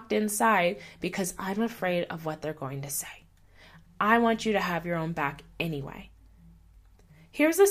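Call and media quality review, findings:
No audible faults found in the speech recording.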